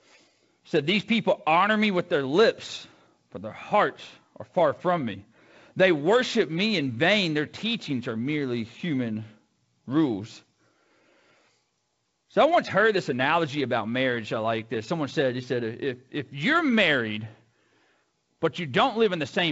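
No faults in this speech; the G.722 wideband coding at 48 kbit/s behaves as designed, with nothing above about 7.7 kHz and only the light coding noise that rate brings.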